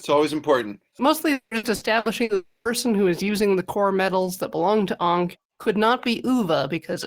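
From about 1.33 to 2.32 s there's repeated packet loss, giving that robotic sound: five separate holes, the longest around 180 ms, each papered over by stretching the last bit of audio. Roughly 42% of that second is patched, so it comes out choppy.

Right after, at 2.35 s, the audio smears into a fading buzz or hiss and then goes quiet for about 210 ms before returning at 2.68 s, with 300 ms simply gone. That's likely a long network dropout, where the receiver ran out of real audio.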